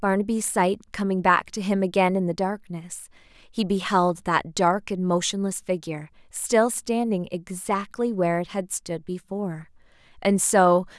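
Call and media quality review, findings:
No faults found in this speech recording.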